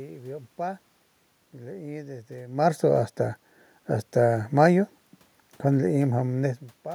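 No technical faults can be heard anywhere in the recording.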